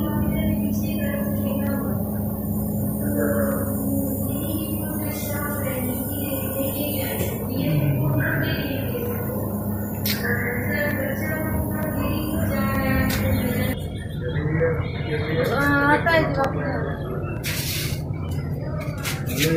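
Clock drift buffer slips run from 0.75 s to 19.2 s: a click or pop recurs every 0.92 s, about twenty times in all, at a steady, almost metronomic pace. The likely cause is two devices each running on their own sample clock, mismatched by something around 400 ppm, so the buffer between them slowly drifts until it drops or repeats a small block of samples, around fifteen each time, producing the regular tick.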